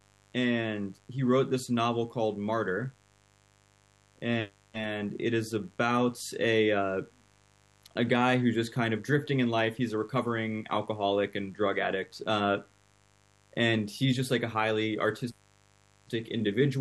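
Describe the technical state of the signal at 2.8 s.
At 2.8 s the speech carries mains buzz, present throughout the clip. Sharp switching spikes twice per 50 Hz cycle spray harmonics up into the kilohertz range, giving a steady, raspy buzz that sits well below the speech, roughly 35 dB down.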